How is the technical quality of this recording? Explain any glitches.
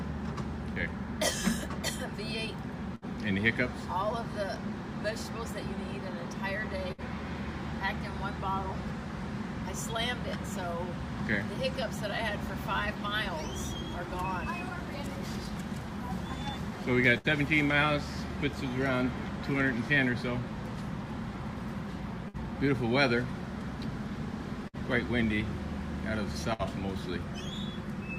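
The recording has six short dropouts from a burst of packet loss. They occur at 2.95, 6.92, 17.18, 22.28, 24.68 and 26.53 s. At each one, the last sound is stretched and faded for roughly 60 ms. Then about 60 ms of audio is skipped.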